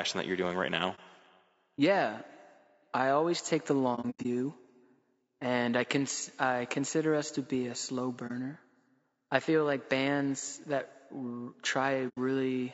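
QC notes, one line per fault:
Throughout: low-delay AAC compression. The speech sounds rough and grainy, with a noisy haze between the harmonics that never clears. The likely cause is AAC-ELD, the low-delay AAC used in video calls, at a rate that fits around 32 kbps. Its short frames of roughly 30 ms cannot separate closely spaced pitch harmonics well and use bits less efficiently, so at this rate the coarse coding of the spectrum is plainly audible.
0.95–0.99 s, 3.95–4.26 s, 8.27–8.31 s, 12.08–12.18 s: AAC frame loss with muting. Each is a soft-edged dropout. The first follows "you're doing right now" and the third follows "to be a slow"; each lasts about 30 ms, consistent with one lost frame. After "I always take the", about 180 ms of scattered gaps spread over 300 ms, the longest about a tenth of a second. Near the end, 90 ms goes. The decoder zeroed the missing frames, and the overlapping windows fade the sound out and back in.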